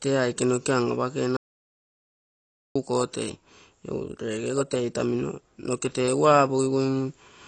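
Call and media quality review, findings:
AAC compression, throughout: dull, smeared speech, fizzy sibilants, plainly audible codec damage. Spectrogram shows a hard ceiling near 8.7 kHz. Likely AAC-LC at a low bitrate, around 32 kbps, dropping and coarsely quantising high bands.

Audio dropout to silence, 1.37 to 2.75 s: speech cuts out mid-flow for about 1.39 s, with no room tone. The waveform is a flat line of silence and the spectrogram a blank vertical band. Likely lost input upstream, with the encoder writing silence.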